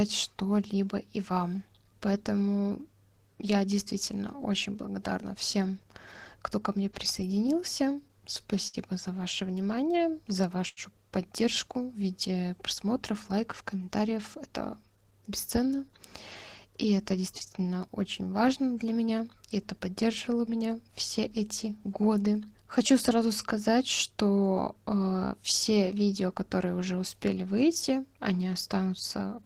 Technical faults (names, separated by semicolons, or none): repeated stalls (stutter); jitter buffer slow-down; short stall from a late packet; jitter buffer speed-up